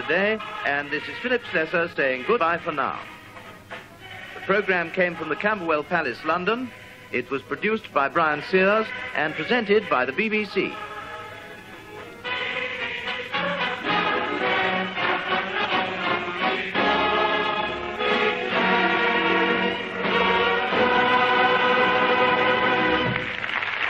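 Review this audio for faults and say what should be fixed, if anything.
Compressed frames are skipped at 2.38 s, 15.64–15.66 s and 20.96 s, where the audio jumps ahead by roughly 70 ms, 200 ms and 50 ms. Each skip is a whole number of 23.2 ms frames. Prevent this by checking file integrity and repairing or re-encoding damaged or incompletely written frames.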